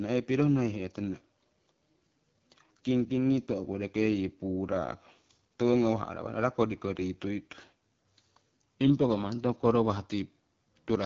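From start to finish the speech goes through AMR wideband (HD Voice) coding at a low rate, likely around 8.85 kbit/s, leaving it rough and raspy, with nothing above 6.7 kHz.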